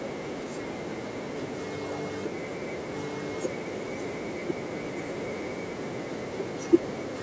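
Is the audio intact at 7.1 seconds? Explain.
Yes, the speech at 7.1 seconds is intact, with no fault at that moment beyond the ordinary call microphone processing, which trims the lowest bass and leaves nothing above 8 kHz.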